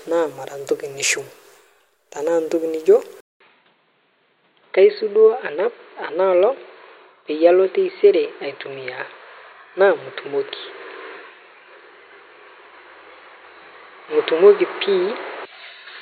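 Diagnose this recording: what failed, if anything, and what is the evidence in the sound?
At 3.20 s there's a gap of about 200 ms, and from there to the end the speech loses everything above 4.4 kHz and turns dull and boxy, with a different, fairly faint background noise underneath. The level barely moves. That all points to the capture stage: the input likely switched to a poorer device, such as another microphone or a headset's call profile, whose narrower band and own noise floor carry the rest of the recording.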